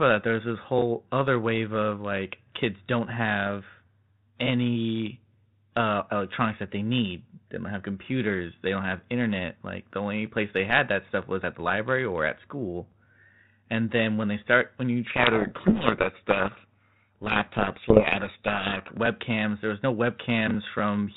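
Speech coded as telephone-band G.726 ADPCM, consistent with 32 kbit/s. From 15.1 to 18.89 s, just after "they start when you", a codec payload misread buries the speech in harsh distortion because the decoder reads each G.726 code word with its bits in the wrong order.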